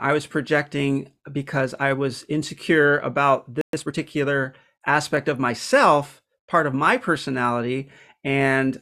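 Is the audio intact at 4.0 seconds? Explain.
No, the player is still catching up after a stall, with time-compressed catch-up from 3.73 to 3.97 s cutting and cross-fading snippets, so speech runs 1.5 times fast, at normal pitch.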